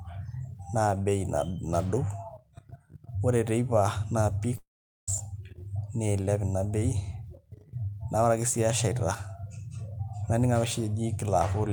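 At 4.57 s, just after "ore teipa naa peak", the speech smears into a fading buzz and then goes silent until 5.09 s. This is likely a long network dropout. Half a second never arrived and is skipped outright, rather than smoothly patched as in brief packet loss.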